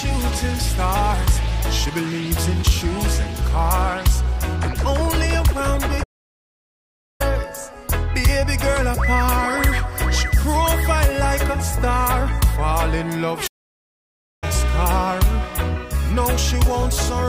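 The player twice stopped delivering output, most likely because it ran out of buffered data or its thread was blocked, causing a playback stall: the audio cuts to silence from 6.03 to 7.21 s (about 1.17 s) and again from 13.47 to 14.44 s (about 0.95 s), then resumes.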